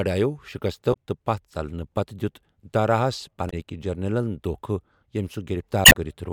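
Damaged data in the compressed speech stream breaks decoding three times. Corrupted bytes make the decoder misread frames, lose sync and hunt for the next valid frame header. Each break is a short glitch that cuts into the speech: from 0.90 to 0.96 s, from 3.47 to 3.53 s just after "دِیوٗت داراہس", and a longer one from 5.82 to 5.95 s.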